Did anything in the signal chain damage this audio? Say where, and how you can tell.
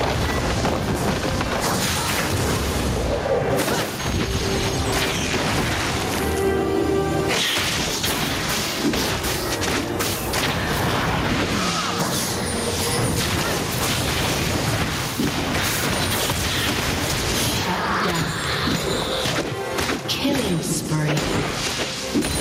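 Yes: gain pumping throughout the clip. The gain swings by around 20 dB, ducking under each loud sound. On the waveform, loud and soft parts sit close in level, squashed together. The likely cause is input gain set far too high at the microphone stage, with a fast limiter repeatedly pulling it down.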